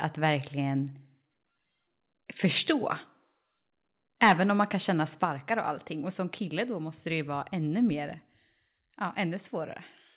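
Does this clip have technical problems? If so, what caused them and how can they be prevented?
Yes. Two microphone overload events are audible: a 0.26 s stretch at 2.44 to 2.70 s, and a brief burst at 5.22 to 5.25 s, just after "kan känna". Both sound flattened and crackly on their loudest peaks, with the signal about 2 dB beyond full scale, likely because the input gain was set too high for the talker. The first event clips only a small fraction of samples, while the second clips a few percent, so its distortion is harsher. Prevent this by lowering the microphone gain so speech peaks sit well below full scale.

The microphone volume stepped down twice. At 5.25 s, right after the second overload and before "och allting", voice and background both drop by about 4 dB at once. At 8.31 s, just after "ju vara ännu mer", they drop again by about 2 dB. This is likely the call software's automatic gain control cutting the device input after it saw peaks near clipping. 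Because the level changes in abrupt steps rather than ramping smoothly, the change is audible. Setting a correct fixed input level, or disabling automatic gain adjustment, avoids these steps.

The audio passed through a narrowband call path with no content above 4 kHz, consistent with G.711 A-law at 64 kbps.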